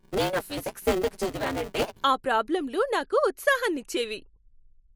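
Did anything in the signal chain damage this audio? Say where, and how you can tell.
Yes. Buffer tearing runs from the start to 2.04 s, a robotic 188 Hz rattle riding on the speech. It comes from the driver's ring buffer: writer and reader have slipped, so roughly a third of each 256-sample period replays audio about 10 ms old between hard joins.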